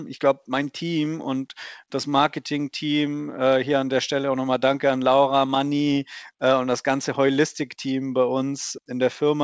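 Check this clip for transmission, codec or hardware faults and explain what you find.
Two related timing faults run through this speech clip. They ride on a G.722 call path that passes nothing above 8 kHz.

Clock drift between sender and receiver is present throughout. The sender's clock runs roughly 3 percent slow. The receiver's jitter buffer keeps draining, so playback has to be padded out. The result is a faint, persistent unevenness rather than one clear glitch.

Repeated timing corrections run from 0.28 s to 9.24 s. The receiver repeats short pieces to fill the shortfall, adding around 200 ms in total. Playback runs at 98 percent speed. These small stretches are heard, if at all, as slight hiccups and a subtly dragging, unsteady tempo.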